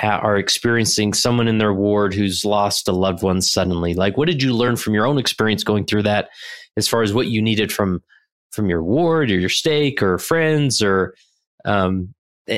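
At 4.67 s, right after "like what did you" and before "from your own experience", there is a brief blip from damaged data in the compressed stream: corrupted bytes made the decoder misread a frame and lose sync until it locked onto the next valid frame header.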